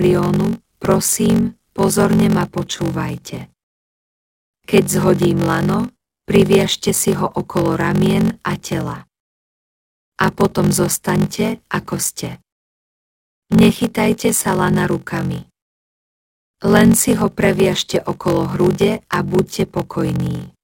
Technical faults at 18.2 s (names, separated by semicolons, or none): block size mismatch (padded)